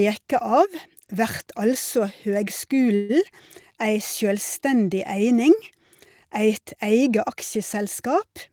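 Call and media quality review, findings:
Call audio freeze, 2.95 to 3.11 s: the sound stalls into a short fading buzzy hiss, about 0.14 s of filler, then resumes exactly where it stopped, with nothing lost. Likely component: jitter buffer underrun after delayed packets, with receiver concealment extending the last sound. Net effect: a 138 ms gap inserted and latency increased by the same amount.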